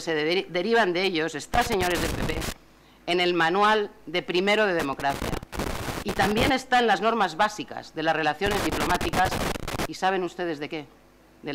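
Loose connector crackle at 1.54–2.52 s, 4.79–6.59 s and 8.46–9.85 s: a worn contact making and breaking, giving irregular scratchy bursts, unlike evenly spaced digital clicks.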